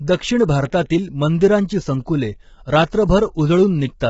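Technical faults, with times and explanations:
Throughout, low-delay AAC compression: the speech was likely encoded with short-frame low-delay AAC starved of bits, which fits roughly 16 kbps, so pitch harmonics blur, leaving heavily rough, grainy tone with noise between harmonics and nothing above 7.7 kHz.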